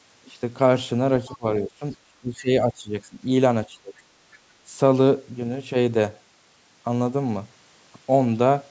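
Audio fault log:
1.26–1.36 s, other side's voice leaking through: a faint second voice, roughly 25 dB below the main speech, slips in for about a tenth of a second, likely loudspeaker echo the canceller left behind. A spectrogram shows a weak, separate harmonic pattern beneath the talker's.
1.27–1.46 s, 1.64–1.82 s, 2.06–3.19 s and 3.7–3.93 s, speech suppressed in double talk: the talker's level dips in patches by roughly 10 to 25 dB, likely the echo canceller turning everything down while the far end also spoke. The waveform shows sudden notches in the envelope, and the spectrogram thins and darkens there, most extensively around 2 to 3 s.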